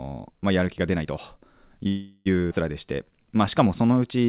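From 1.88 to 2.28 s the speech stalls for 376 ms in a call audio freeze, likely from delayed packets draining the jitter buffer. The last sound is stretched into a fading buzz, then speech resumes intact.

At 2.50 to 2.53 s a skip ahead removes roughly a fifth of a second of speech, and the two sides are spliced almost directly together.

From 2.85 to 4.26 s a jitter buffer slow-down repeats pitch periods to add 150 ms. Speech runs at 90% speed with unchanged pitch, and sounds are drawn out. All of this is heard through narrowband audio with nothing above 4 kHz.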